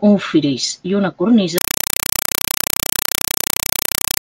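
A Dolby Digital bitstream, consistent with AC-3 at around 192 kbps, is being passed to the output as if it were ordinary PCM samples instead of being decoded. From 1.58 s, right after "un fris i una", the speech gives way to loud, chattering static to the end. That static is compressed-stream data played as audio: 4 ms noise bursts separated by silent padding, repeating 31.25 times per second.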